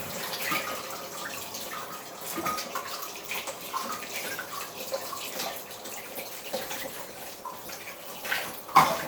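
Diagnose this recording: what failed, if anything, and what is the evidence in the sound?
A call bitrate drop in the codec stage. From 5.96 s to the end at 9.08 s the sound turns coarse and muffled. The top end thins out. This points to the encoder falling from roughly 128 kbps to about 21 kbps, at its lowest for about 1.5 s.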